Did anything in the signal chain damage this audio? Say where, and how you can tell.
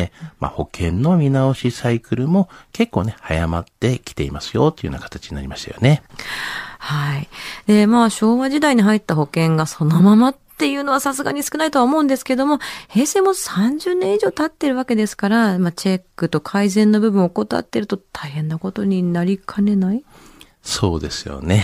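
Yes. For the first 2.0 s the speech sounds dull and swirly, its treble thin and synthetic, then clarity jumps with no gap. That points to playback of an adaptive stream starting at a low bitrate, consistent with roughly 20 kbit/s HE-AAC stepping up to about 96 kbit/s AAC-LC.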